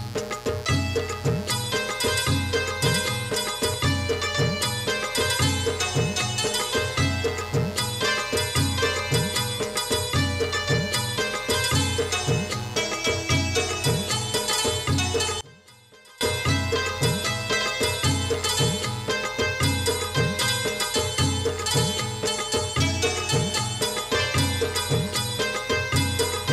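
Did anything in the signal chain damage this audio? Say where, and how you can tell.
Yes. A steady, raspy mains buzz runs through the whole clip, sitting around 20 dB below the signal. It is built on 60 Hz harmonics, which points to the analogue wiring stage, where a dimmer, rectifier or poor shielding couples switching spikes into the line twice per mains cycle.

From 15.41 to 16.21 s the level collapses by about 26 dB and then returns. Such a deep, brief cancellation on mono summing is likely one channel inverted: with one side's polarity reversed, the content common to both channels cancels, leaving only their difference.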